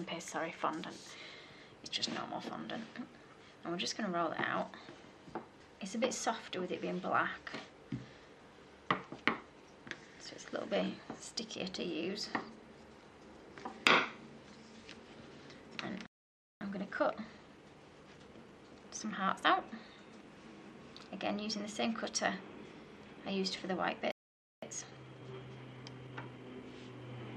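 A playback stall hits at 16.06 s: the sound cuts out mid-flow and stays silent for about 0.55 s, until 16.61 s. The gap likely comes from the player running out of buffered data or its output thread being blocked before it recovered.

Time-compressed catch-up follows from 16.61 to 19.61 s, with the audio running at 1.1 times normal speed to absorb the backlog. Small pieces are trimmed and cross-faded together, so the sound is hurried while keeping its normal pitch.

A second playback stall comes at 24.11 s, again an abrupt silence of about 0.51 s lasting to 24.62 s, likely the same starvation or blocked thread interrupting output.

A second time-compressed catch-up runs from 24.62 to 26.66 s, this time faster at 1.25 times speed. The more aggressive splicing makes the rush more obvious, while the pitch stays put.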